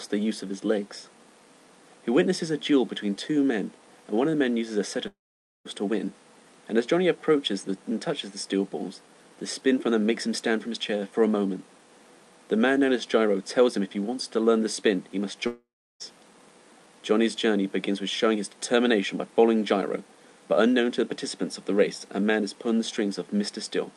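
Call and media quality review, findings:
Long network dropout, 5.07–5.67 s: about 0.58 s of audio missing. Brief fading concealment buzz, then about 0.5 s of silence, audio resumes past the lost section. Likely cause: packet loss on the call path, jitter buffer concealing, then muting.

Long network dropout, 15.47–16.02 s: about 0.54 s missing. Same pattern: short concealment tail, then about 0.34 s of silence before audio returns without the gap content. Call codec path itself audible as usual coding noise and band limiting near 12 kHz.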